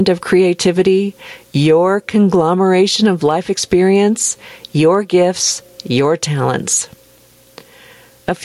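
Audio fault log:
Throughout, gain pumping: the gain swings by roughly 15 dB, leaving loud and quiet passages squashed close together. This likely comes from input gain set far too high, with a fast limiter or compressor clamping down on each peak.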